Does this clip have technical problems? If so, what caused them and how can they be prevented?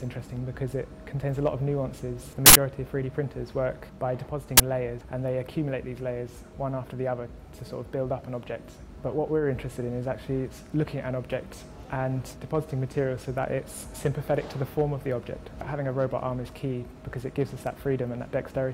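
Yes. A short, loud burst of harsh digital noise cuts into the sound from 2.46 to 2.55 s, and a briefer loud crack from 4.57 to 4.60 s. This is an uninitialised buffer: a block reached playback before any audio was written into it, so leftover memory was played as samples. The burst lengths, 93 ms and 23 ms, fit blocks of 4096 and 1024 samples. Zeroing every buffer when it is allocated, and queuing it only once filled, prevents this.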